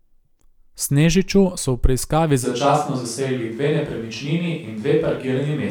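From 2.46 s, right after "so v preiskavi", the speech abruptly turns roomy and hollow, thinner in the bass and about 5 dB quieter, with faint background noise, staying so to the end. This is likely a switch to a distant microphone after the close one dropped out.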